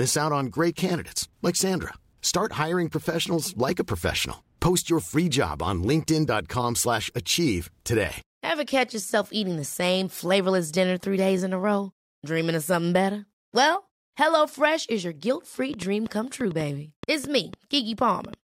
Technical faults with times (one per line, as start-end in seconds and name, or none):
15.74-18.34 train of clicks